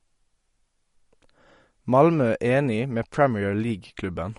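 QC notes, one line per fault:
Throughout: likely MP3 compression, fitting a bitrate near 48 kbps. Nothing remains above 11.1 kHz, and the speech has a plainly audible watery swirl as weak frequency lines flicker between frames. That swirl, beyond lost treble, distinguishes it from plain low-pass filtering.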